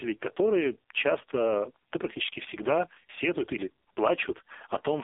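Throughout the clip, the speech has passed through the AMR narrowband mobile codec at a very low bit budget. The damage is heavy enough to point to the lowest mode, around 4.75 kbps. The signal is confined to a phone-line band of roughly 300 Hz to 3.5 kHz, with nothing above 3.6 kHz, so the voice sounds thin and muffled. With so few pulses per frame to drive its vocal-tract model, the codec renders the voice buzzy and synthetic.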